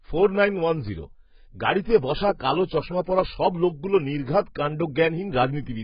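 From start to finish the speech is dull and smeared, with nothing above 5.1 kHz and a warbling, fizzy texture on sibilants. This is likely heavy AAC compression at a bitrate near 12 kbps. The gappy, unstable spectrum sets it apart from a clean low-pass filter.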